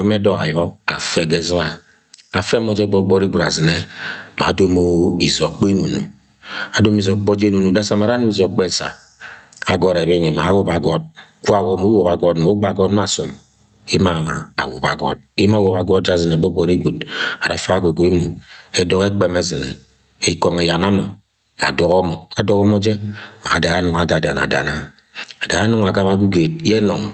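Speech with gain pumping throughout, likely from input gain set far too high and a fast limiter clamping each loud syllable, with the gain swinging by around 20 dB.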